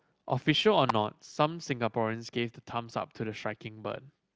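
At 0.89 s an electrical switching spike cuts in: a sharp snap, likely from a nearby switch arcing, showing as a thin full-band vertical line and a narrow waveform spike.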